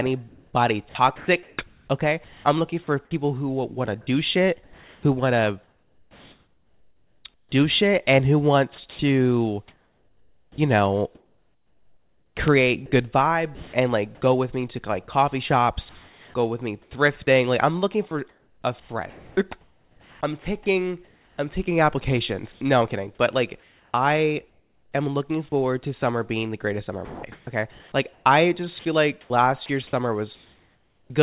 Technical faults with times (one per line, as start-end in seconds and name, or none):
0.29-3.11 sound chopped by the voice detector
4.64-13.73 sound chopped by the voice detector
15.89-16.34 sound dropped by the voice detector
15.89-16.91 comfort noise in place of the background
18.29-25.52 sound chopped by the voice detector
27.05-31.10 sound chopped by the voice detector